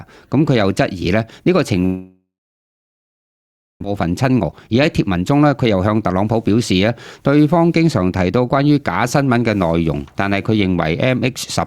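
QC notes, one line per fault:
1.85 to 3.86 s, long network dropout: The sound breaks off at 1.85 s. The last sound is stretched into a short fading buzz, then about 1.5 s of silence follows. It returns at 3.86 s with roughly 1.6 s of material simply gone. This is likely a stall in packet delivery. The receiver concealed the gap briefly, then gave up and waited. The stream resumed later, with the delay shifted by around 0.4 s.
4.00 to 6.49 s, jitter buffer speed-up: Just after the dropout, the audio plays at 114% speed for about 2.5 s, with the pitch unchanged. It sounds rushed. The packets held back during the stall arrived in a burst, leaving the buffer overfull. The receiver then cut many tiny pitch-period slices to catch up. In total it trimmed roughly 0.3 s, shrinking the delay back toward its target.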